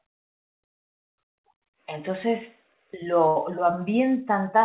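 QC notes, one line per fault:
3.28–3.37 s, burst of packet loss: the last sound smears into a held, fading tail for about 74 ms, then the audio jumps ahead with about 80 ms missing. Several packets were lost or arrived too late, so the receiver extended and faded what it had before resuming.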